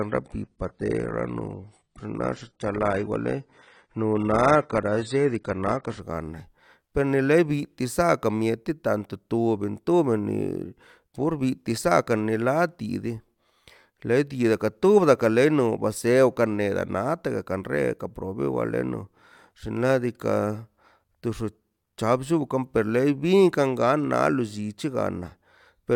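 Speech, opening with an adaptive stream starting at a low bitrate: from 0.0 to 6.0 s nothing is present above 10.5 kHz and codec artefacts are heavier, which fits a low-rate AAC version near 24 kbit/s, before quality steps up abruptly, with no gap, to a fuller-band version.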